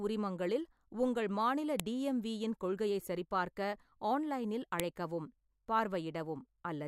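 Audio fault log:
1.80 s and 4.80 s: file header played as audio. Two sharp, loud clicks land exactly 3.0 s apart, which fits the speech having been joined from 3-second WAV pieces whose headers were left in place. Each piece's few dozen header bytes are read as sample values, producing a brief burst of arbitrary amplitudes that snaps out regardless of what the speech is doing at that instant.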